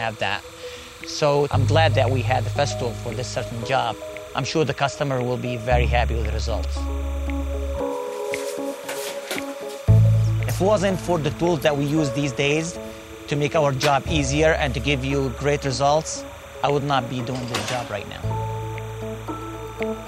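Timecode bleed runs from the first moment to the last: a linear timecode signal from a neighbouring track or cable has leaked into the audio path, and its pattern fits 30-frame code. Because the code is a square wave flipping between two pitches an octave apart, it sits behind the sound as a steady chirping warble near 1 kHz and 2 kHz, roughly 25 dB below the programme and present the whole way through.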